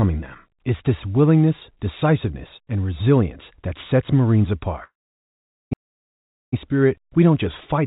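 From 4.84 to 6.54 s there is a long network dropout, likely packets that never arrived. The receiver stretched the last sound into a fading buzz for about 0.87 s, then left about 0.8 s of silence before "spirit we don't just" resumes, with the missing audio simply gone.

At 5.73 s, inside that gap, a CD skip occurs: the laser jumped to another turn of the disc's spiral, so the player muted briefly and resumed from a different point, heard as a tick and a jump, all within the 4 kHz-limited G.711 call path.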